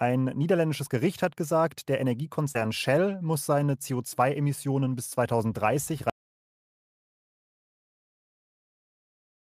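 At 2.51 s a short concealed packet loss begins and runs to 2.60 s. About 40 ms of the stream arrived too late, and the receiver extended the preceding sound to cover roughly 31 ms of it, leaving a brief smeared wobble. Unlike a hard gap, there is no silence.

Overlapping it, from 2.55 to 2.65 s, comes a lost packet rebuilt from error correction. About 60 ms, which suggests several separate packets, was restored from the low-bitrate copies carried by following packets. These frames turn grainier and noisier rather than smeared, and there is no gap at all.

At 6.10 s the audio drops out to silence and never returns before the end. The gap is silent with no room tone, which separates it from a pause or a fade. The likely cause is a lost input, such as a disconnected device or a stray mute.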